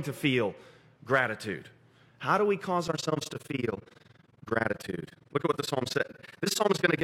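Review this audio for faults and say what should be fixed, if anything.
From 2.88 s, just after "do we cause", to the end, the speech has overlap-add ripple. Frames were rejoined with an overlap that doesn't sum to constant gain, so the level dips about 60 dB roughly twenty times a second, producing a harsh flutter. The waveform envelope pulses in regular beads, and a spectrogram shows evenly spaced vertical gaps across all frequencies. To prevent it, use a window and hop size that satisfy the constant-overlap-add condition, such as Hann windows at 50% overlap.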